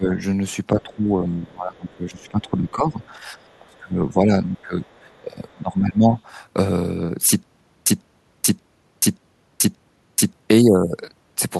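An echo canceller that likely could not tell its own talker from the loudspeaker echo during double talk turns the speech down, producing speech suppressed in double talk. The dips run from 0.0 to 0.2 s (about 10 dB), from 0.7 to 3.4 s (about 20 dB), from 3.59 to 4.88 s (about 25 dB), and from 5.05 to 6.14 s (about 20 dB). The voice sinks across these stretches.

In the same region, residual echo the canceller likely failed to remove lets the other side's voice leak through. It comes as brief scraps at 3.01 s and 4.56 s and as longer fragments from 3.41 to 3.59 s and from 4.87 to 5.21 s. It is faint, about 35 to 40 dB below the speech.

From 7.43 to 10.33 s, a stalled stream likely replays its last fragment at each retry and then runs dry. The result is a stutter with silent gaps. A 147 ms burst repeats five times, every 580 ms, with 432 ms of digital silence between repeats, and the audio that should have filled that span is lost.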